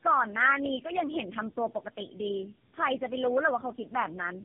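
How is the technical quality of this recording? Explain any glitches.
The quality is poor, with one fault running through the whole clip. Tandem speech coding is present from start to finish. The speech was encoded and decoded three times in a row by different low-rate speech codecs, consistent with G.729A, GSM full rate and AMR-NB. Each stage re-coded the previous stage's errors, so the speech sounds rough, muffled and warbly. On a spectrogram, nothing shows above 3.5 kHz, and the harmonics look smeared and blotchy.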